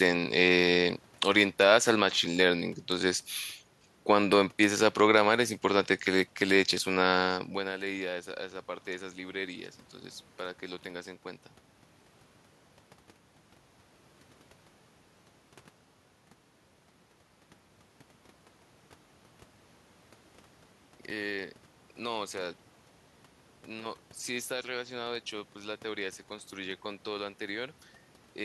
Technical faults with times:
none

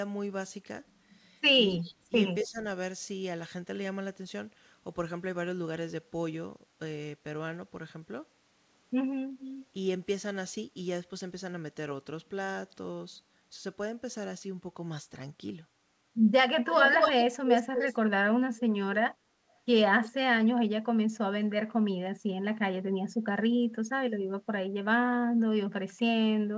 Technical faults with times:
1.77-1.94 echo leak
2.09-2.64 speech suppressed in double talk
2.41-2.48 echo leak
9.39-9.66 echo leak
16.69-17.98 echo leak
18.57-18.61 echo leak

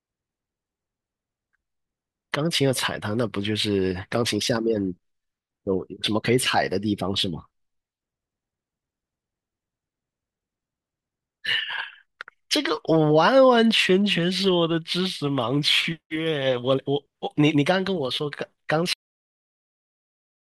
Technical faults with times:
18.93-20.54 cut-off end

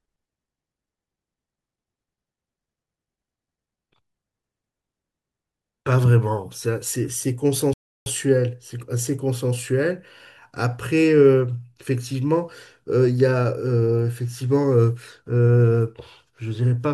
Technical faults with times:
7.73-8.06 rebuffering stall

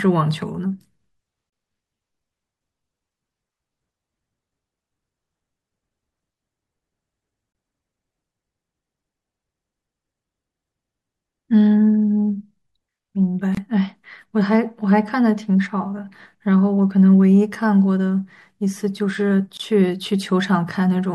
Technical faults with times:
1.50-1.52 gap at a join of encoded pieces
7.52-7.55 gap at a join of encoded pieces
13.55-13.57 gap at a join of encoded pieces
19.57-19.60 gap at a join of encoded pieces

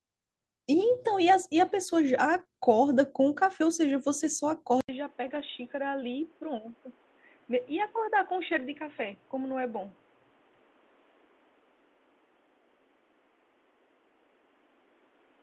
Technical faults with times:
2.35-2.41 lost packet rebuilt from error correction
2.43-2.47 short concealed packet loss
4.81-15.42 input switched to a poorer device
5.27-5.41 lost packet rebuilt from error correction
8.51-8.61 lost packet rebuilt from error correction

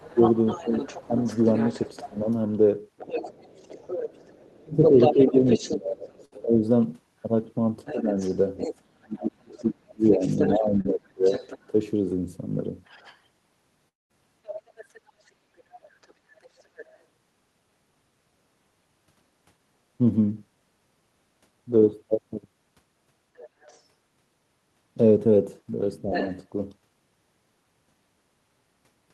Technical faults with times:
0.00-16.98 other side's voice leaking through
0.15-2.27 speech suppressed in double talk
4.63-11.74 speech suppressed in double talk
6.25-6.39 burst of packet loss
10.81-10.86 short concealed packet loss
13.88-14.13 long network dropout
23.37-23.81 other side's voice leaking through
26.12-26.38 other side's voice leaking through

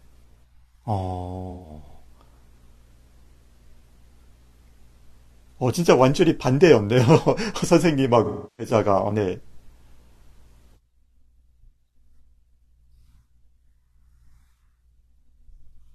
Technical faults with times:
1.50-1.69 AAC frame loss with concealment
8.24-8.73 AAC frame loss with concealment

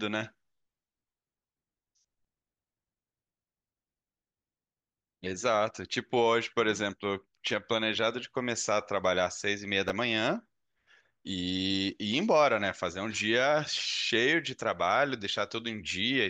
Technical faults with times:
9.88 chunks out of order

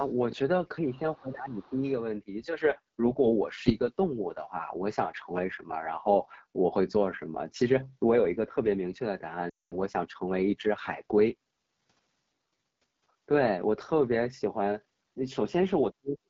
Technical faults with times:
0.00-16.30 AMR wideband (HD Voice) codec
1.15-1.21 other side's voice leaking through
1.20-1.83 speech suppressed in double talk
1.55-1.90 other side's voice leaking through
9.49-9.74 lost AMR speech frames
15.91-16.30 speech suppressed in double talk

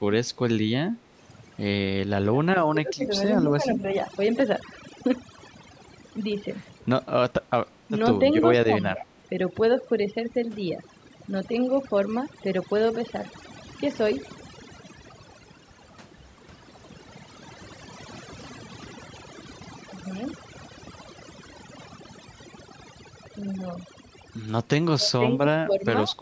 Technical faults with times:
0.00-26.21 overdone noise removal
2.31-3.05 speech suppressed in double talk
3.42-3.85 speech suppressed in double talk
8.63-9.05 speech suppressed in double talk
24.94-26.16 speech suppressed in double talk

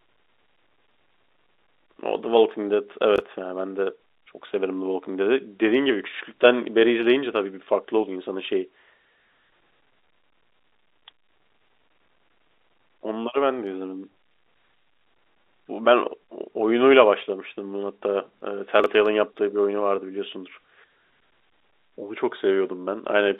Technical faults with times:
3.16-3.20 chunks out of order
18.80-18.86 chunks out of order

